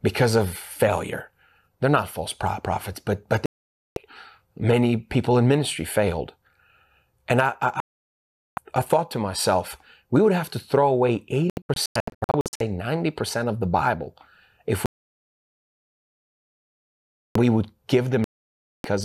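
The speech cuts to silence at 3.46–3.97 s, 7.80–8.58 s, 14.86–17.36 s and 18.24–18.85 s, and stutters through short holes of up to 0.1 s across 11.50–12.61 s. This is digital broadcast dropout: the receiver muted whenever frames arrived corrupt or missing, losing that audio.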